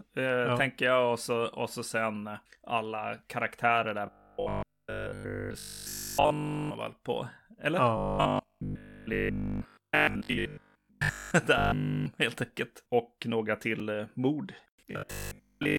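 From 4.06 to 6.75 s, after "sen alla karaktärer där" and up to "väl på", the speech turns into robotic sound from repeated short buffers. A rigid 50 Hz buzz replaces it, likely from 20 ms buffers repeating. It returns from 7.97 to 11.31 s, mostly repeated, and from 11.58 to 12.06 s. At 13.80 s, just before "eh mord", a 2.9 ms block of digital silence is heard as a tick. It fits a 128-sample gap. After "eh mord", from 14.91 to 15.77 s, the robotic buzz returns.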